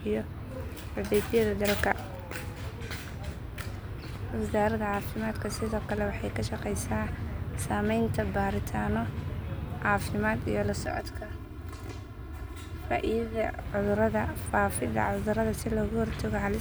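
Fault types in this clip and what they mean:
channel delay (comb filtering): one channel trails the other by roughly 3 ms, and summing them to mono cancels shared content at evenly spaced frequencies starting near 150 Hz. From 10.86 to 13.59 s the speech turns hollow and phasey; a spectrogram shows regular horizontal notch stripes.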